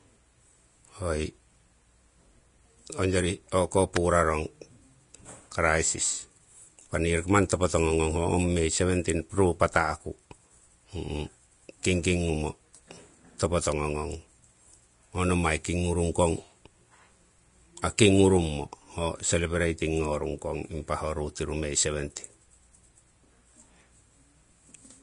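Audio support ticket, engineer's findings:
Throughout: plainly audible grainy, hissy treble, nothing above 10.6 kHz; likely Vorbis compression near 34 kbps, coarse treble quantisation turning fine detail into noise.

3.96 s and 13.72 s: sharp snaps over the speech; likely electrical switching spike, an arc from a nearby switch, motor or static discharge picked up by the line.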